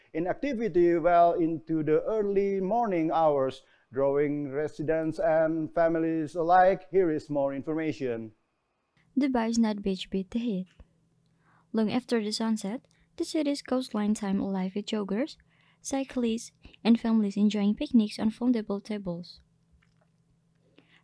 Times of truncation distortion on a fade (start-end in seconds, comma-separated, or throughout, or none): none